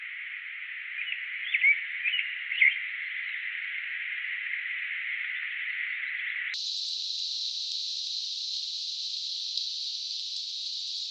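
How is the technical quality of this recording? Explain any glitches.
The recording has one serious glitch that runs from about 6.54 s to the end of the clip.

From 6.54 s onward the audio is read two samples at a time, at double speed. The playback treats each pair of samples as a single frame, as if the data held two channels or samples twice as wide, so the material passes at twice its true rate and rises an octave (12 semitones). The sound turns chipmunk-like and hurried. On a spectrogram, every component jumps to double its frequency at 6.54 s. In the waveform, events after that point appear compressed in time.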